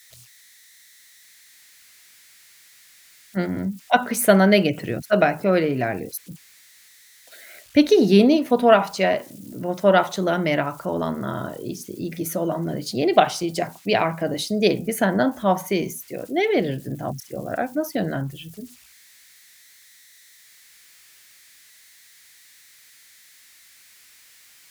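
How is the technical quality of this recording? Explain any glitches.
The recording has one persistent technical fault. Converter idle tones run through the whole speech clip: a faint whistle around 2 kHz sits in the pauses and turns grainy under quiet passages, about 32 dB below the speech. An undithered delta-sigma converter, fed a very small input, settles into repeating bit patterns that produce these tones.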